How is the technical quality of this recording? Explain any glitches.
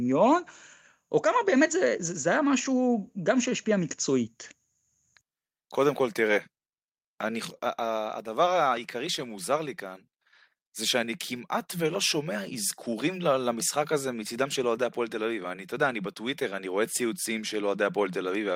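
No technical faults are audible.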